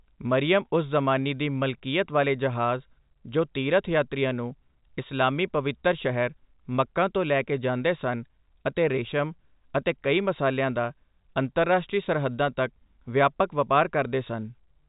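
No technical faults can be heard in the speech. It carries the narrow band of G.711 telephone coding, with nothing above 3.8 kHz, and any codec damage is faint at most.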